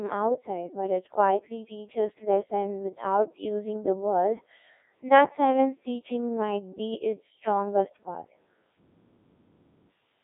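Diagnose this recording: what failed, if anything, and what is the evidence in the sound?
Buzzy, robotic speech throughout, with nothing above 3.8 kHz, points to the codec stage: a Codec 2 vocoder rebuilding sound from sine waves, fitting about 1.6 kbit/s.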